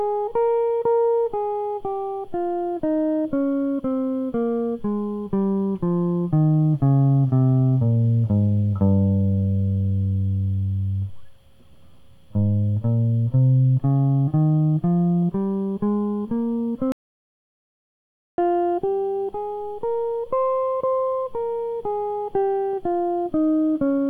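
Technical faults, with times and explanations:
16.92 to 18.38 s, audio dropout to silence: the music breaks off mid-flow and stays completely dead for about 1.46 s, with no room tone or decay tail, then resumes abruptly. The likely cause is that the input signal was lost, through a disconnected device, failed link or mute, while recording carried on writing zeros. On the waveform this is a flat line at zero; on a spectrogram, a fully black vertical band with sharp edges.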